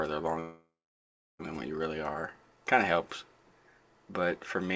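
From 0.40 s to 1.41 s there is a call audio freeze: the last sound carries on as a fading buzz or hiss, then about 0.7 s of silence, before the audio resumes where it stopped. This likely came from delayed packets emptying the jitter buffer, inserting roughly 1 s of gap with nothing lost, all within the call path's 8 kHz bandwidth limit.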